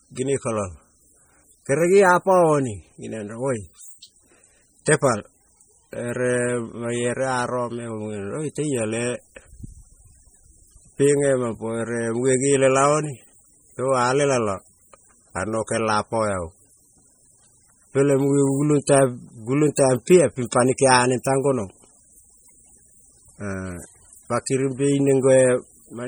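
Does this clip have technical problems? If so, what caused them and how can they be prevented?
Yes. MP3 compression artefacts run through the whole speech clip, from start to finish. The sound is watery and swirling, with metallic chirps on s sounds and smeared attacks. These are likely caused by heavy MP3 encoding at a low bitrate, consistent with about 32 kbps. With so few bits, the encoder zeroes weak frequency lines, and they flicker on and off from frame to frame. To prevent this, record and deliver at a higher bitrate or in a lossless format.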